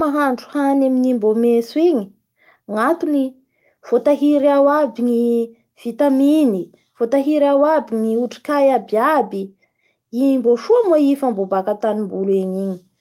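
No technical faults can be heard anywhere in the speech recording; the signal stays continuous and stable throughout.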